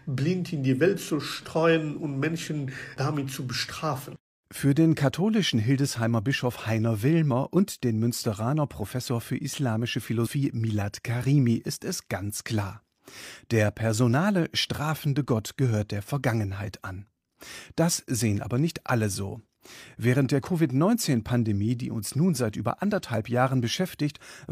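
A speech clip with two brief blips, at 4.14 to 4.19 s and 10.22 to 10.28 s, caused by damaged data in a compressed stream that briefly throws the decoder off its frames.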